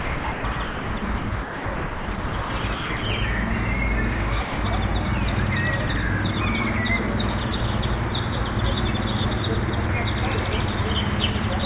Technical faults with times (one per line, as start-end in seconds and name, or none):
0.00-3.02 sound chopped by the voice detector
4.42-4.58 sound dropped by the voice detector